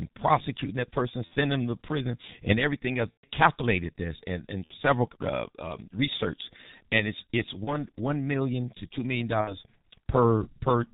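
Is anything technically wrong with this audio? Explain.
Yes. G.723.1 codec coding, throughout: the speech is squeezed into 30 ms frames at a very low rate, which fits about 6.3 kbit/s. Nothing above 4 kHz survives and the slowly updated voice model leaves it heavily muffled and hoarse, with smeared consonants.

VoIP packet loss concealed by the speech codec, at 1.25–1.33, 3.12–3.26, 4.64–4.72, 7.64–7.70 and 9.41–9.57 s: the decoder filled each gap (mostly about 60 ms, about 120 ms at 3.12 s) by repeating its last pitch and filter with falling gain. The result is a fading buzzy or noisy smear, and the speech stays weakened briefly afterward.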